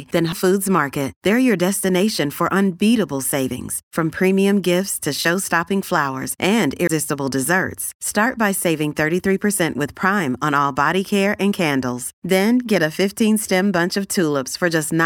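At 0.32 s, and again at 6.88 s just after "flowers and", a CD skip: the laser jumps tracks, muting for a few milliseconds, then about twenty, before resuming elsewhere. Each is a tick and abrupt jump, shown as a brief flat gap and a vertical broadband line.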